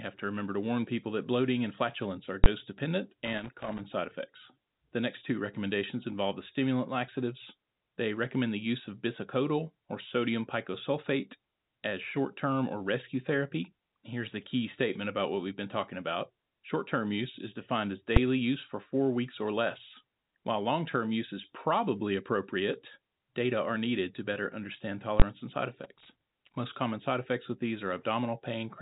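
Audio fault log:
2.44 s, 18.16 s and 25.2 s: invalid numbers at full scale. A calculation produced infinite or invalid values, pinning the output to one extreme value for one block each (about 20, 5 and 20 ms). Each is heard as a single loud bang, the first right after "bloating and flatulence are". On a waveform each block is a flat slab far beyond the speech peaks, and on a spectrogram it is a thin vertical stripe across all frequencies.
3.25–3.8 s and 25.84–26.56 s: loose connector crackle. A worn contact made and broke rapidly, chopping the speech into an irregular scratchy burst. The first burst ends just before "side effects", and the second starts after "and side". A waveform shows ragged gaps and spikes, and a spectrogram shows scattered broadband speckle over the narrow telephone band.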